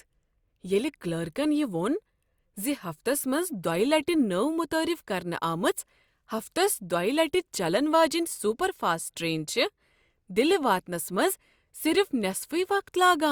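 No audible technical faults turn up in this recording.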